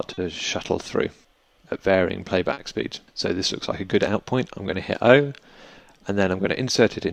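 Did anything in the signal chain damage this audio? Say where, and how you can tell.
Yes. Clock drift between sender and receiver, at the network stage: small timing hiccups recur throughout at uneven intervals, because the sender's clock runs roughly 3 percent slow.

Short stalls from a late packet, in the jitter buffer, at 0.13 to 0.19 s and 2.53 to 2.59 s. Each holds the sound about 40 ms while the buffer empties, with nothing lost.

Repeated timing corrections, in the receiver's buffer, from 1.22 s to the end. Unevenly spaced small repeats stretch playback to 97 percent speed, adding roughly 150 ms.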